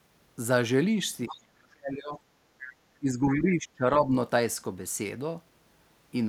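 A speech recording with echo-canceller trouble on a hands-free path. Brief scraps of the other side's voice leaking through appear at 1.28–1.36 s and 3.31–3.38 s, each sitting around 15 dB under the talker. This is likely residual loudspeaker echo that the canceller failed to subtract from the microphone signal, so the far end's audio survives as short fragments. Speech suppressed in double talk follows in three places. From 1.35 to 2.19 s the talker drops sharply, by something like 35 dB at worst, with roughly a second affected. From 2.99 to 3.85 s a milder dip of around 20 dB affects the voice for most of that span. At 4.01–4.08 s there is only a slight, brief sag. The likely mechanism is that both ends were talking at once and the canceller, unable to tell its own talker from the echo, attenuated the whole microphone path. Between these events, at 2.47–2.71 s, the background is gated by the echo canceller. 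The room tone falls by about 7 dB for roughly a fifth of a second and then comes back, which is the suppressor clamping the microphone while the loudspeaker was active and releasing once it stopped.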